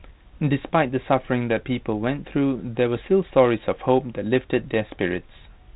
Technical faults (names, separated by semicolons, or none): none